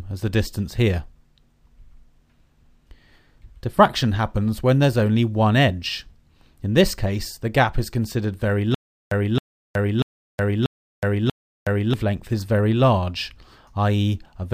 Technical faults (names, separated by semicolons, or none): stutter with silent gaps